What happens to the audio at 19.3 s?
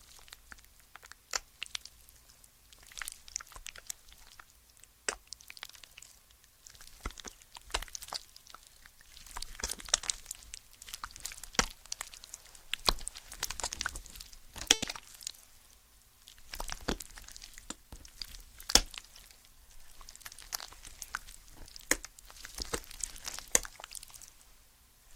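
At 19.3 s the sound is inside a jitter buffer speed-up running from 16.75 to 19.74 s. The receiver trimmed short pitch-period slices to drain excess buffered delay, about 150 ms in total, so playback runs 4% fast at unchanged pitch. On a spectrogram, harmonics keep their frequencies while events sit slightly closer together.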